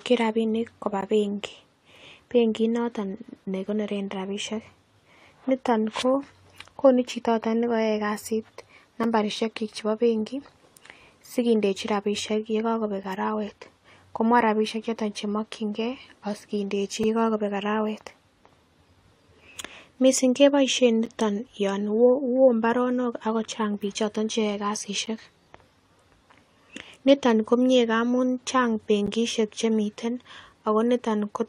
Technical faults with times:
1.01 gap between stream segments
9.04 gap between stream segments
13.03 gap between stream segments
17.03 gap between stream segments
21.05 gap between stream segments
25.06 gap between stream segments
29.06 gap between stream segments

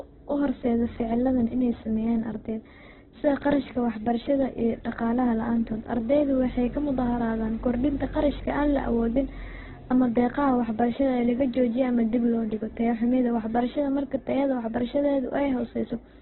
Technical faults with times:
0.00-16.22 Opus compression

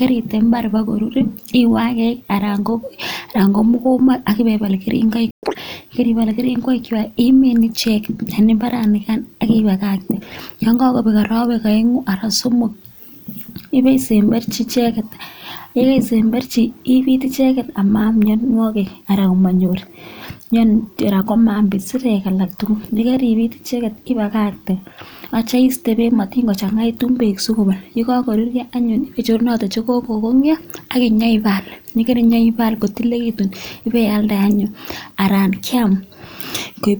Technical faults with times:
5.31-5.43 playback stall
5.43-5.55 catch-up at higher speed

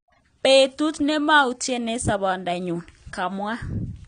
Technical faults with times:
0.00-4.07 AAC compression

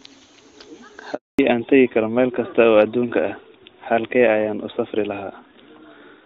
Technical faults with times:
1.15-1.39 handover gap
1.39-6.26 fallback to narrowband

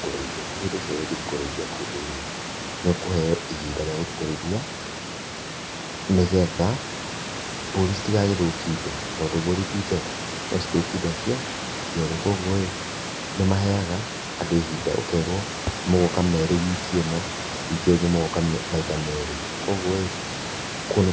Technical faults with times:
none

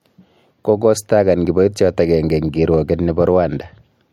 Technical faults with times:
none

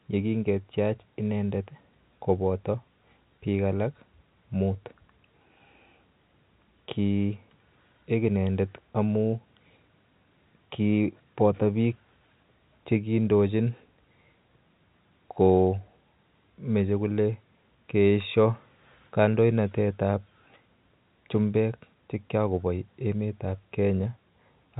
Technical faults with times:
none

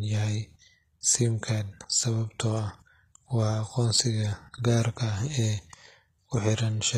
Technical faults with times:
0.00-6.98 HE-AAC compression

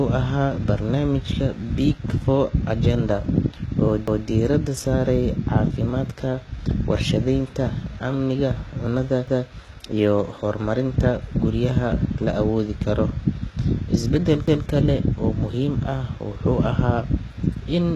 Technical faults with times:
0.00-17.95 HE-AAC compression
4.08-4.28 overlapping chunks
9.28-9.48 overlapping chunks
14.48-14.68 overlapping chunks

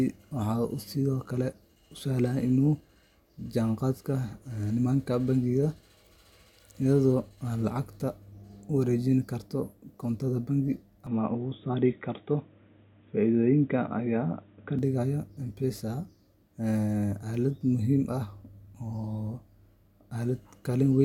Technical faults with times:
11.07-14.79 input switched to a poorer device

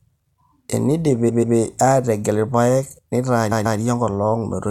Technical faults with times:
1.28-1.56 repeated frames
3.51-3.79 repeated frames

